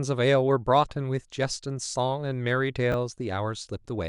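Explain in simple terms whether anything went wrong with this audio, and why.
Chunks out of order, from 2.92 to 2.94 seconds. The speech is carried in tiny slices, each about 10 milliseconds long. Here one slice arrived a step late and played after the slice that should have followed it. No sound is lost, but the pair is swapped. That leaves three abrupt joins in quick succession, so you hear a brief scrambled blip rather than a smooth stretch of voice.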